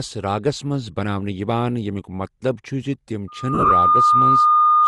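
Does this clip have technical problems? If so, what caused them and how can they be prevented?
Yes. There are three problems.

The whole clip has a breathy, grainy edge on the speech. The upper spectrum sounds thin and partly replaced by hiss. This is likely Bluetooth LC3 compression, the codec of LE Audio. The damage points to a modest bitrate, around 48 kbps, with short 7.5 ms frames. At that rate the encoder drops much high-frequency detail and fills the gap with noise. Using a higher LC3 bitrate or a wired path would prevent it.

A loudspeaker feedback squeal starts at 3.27 s and runs to the end. A steady tone near 1.2 kHz swells over about 0.4 s. It settles about 10 dB above the speech. The microphone is hearing the loudspeaker it feeds. At 1.2 kHz the loop gain exceeds one, so the tone grows on its own until something limits it. Lowering the gain, moving the microphone away from the speaker, or notching 1.2 kHz would prevent it.

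Lost LE Audio frames occur between 3.54 s and 3.71 s. About 120 ms of audio is missing, scattered over 165 ms. That fits 16 lost 7.5 ms frames, with the longest gap around 40 ms. The decoder fills each gap by reusing the last spectrum with random signs. So the squeal tone breaks into a noisy smear there. Better radio conditions, a shorter link distance or fewer competing devices would prevent it.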